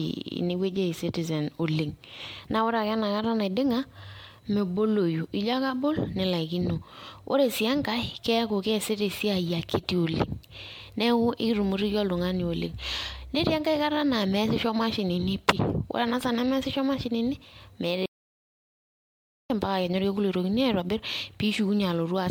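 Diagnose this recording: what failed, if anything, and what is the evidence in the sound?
The speech sounds swirly, smeared and hollow throughout, with blurred consonant attacks and nothing above 19.9 kHz. At the codec stage this is generation loss, likely from about seven MP3 passes at 96 kbit/s, each requantising on a shifted frame grid so errors pile up.

Right after "saa nemeasisho mashinini meeta", the sound cuts to total silence from 18.06 to 19.50 s, a 1.44 s gap with no room tone. This audio dropout to silence points to the input stage: the source was likely lost while the recorder kept writing silence.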